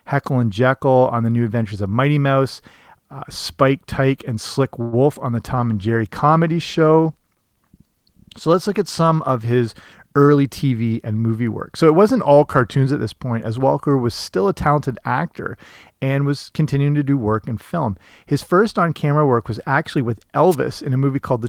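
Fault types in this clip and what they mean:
call audio freeze: Around 4.81 to 4.95 s the sound briefly hangs, with the last sound carried on for about 111 ms as a fading buzz or hiss rather than dropping to silence. It then resumes where it stopped, so nothing is lost but everything after sits about 111 ms later. The likely cause is packets held up in transit, which left the jitter buffer empty until they arrived and playback could continue.
short concealed packet loss: At 5.15 to 5.17 s there is a tiny smear in the speech, where about 20 ms of audio never made it to the decoder. The receiver bridged the gap by extending the preceding sound, using its pitch if voiced or shaped noise if not, for roughly 7 ms. It then cross-faded back into the real signal, which leaves this brief blur instead of a clean hole.
call bitrate drop: From 5.57 to 10.51 s the speech turns rougher and more muffled, with a watery, coarse edge and duller top end. 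The encoder rate fell from 32 kbps to 18 kbps and stayed at its lowest for about 3.4 s, after the call's bandwidth estimate dropped. With so few bits, Opus quantises more crudely and trims high frequencies until the rate recovers.
jitter buffer speed-up: Between 10.12 and 11.07 s the speech sounds hurried, running at about 111% speed while the pitch stays put. The jitter buffer had built up more audio than its target, so the receiver kept cutting out short slices one or a few pitch periods long. Together these slices add up to roughly a tenth of a second, which pulls the delay back down and gives this rushed, clipped pacing.
drift correction step: Twice the speech abruptly detunes by about a semitone and then snaps back. From 12.17 to 12.85 s it slows by 5.9% and drops about 105 cents. From 19.59 to 20.23 s it speeds up by 5.9% and rises about 99 cents. Speed and pitch move together, which points to a clock-matching stage that likely changed the playback rate in one jump to refill or drain its buffer.
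wireless microphone noise hit: At 20.50 to 20.56 s a short swish of static washes over the sound. It is the kind of noise burst an analogue FM radio microphone produces when its signal fades because reflected paths cancel the direct one. As the received level sinks, receiver noise rises sharply, then clears once the signal comes back.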